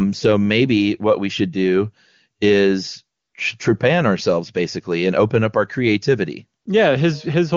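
At 3.19 s, for 140 ms, and again at 6.61 s, for 40 ms, the background drops into a smooth, steady hiss that switches in and out. This is AMR comfort noise: the phone judged the talker silent, stopped sending speech frames, and the receiver filled the gaps with synthetic noise.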